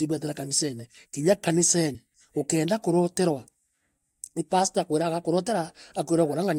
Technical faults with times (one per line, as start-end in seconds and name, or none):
1.94 compressed frames skipped